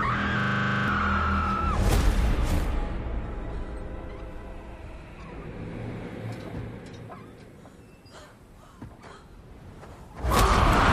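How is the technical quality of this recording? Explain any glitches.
The recording has one clear glitch, a system hang loop between 0.40 and 0.88 s. The computer or audio driver stalled while the sound hardware kept replaying the same 40 ms stretch of its ring buffer. That fragment repeats exactly 12 times, at 25 per second, so the sound turns into a rapid mechanical stutter at that rate. About half a second of the original audio is lost and never heard.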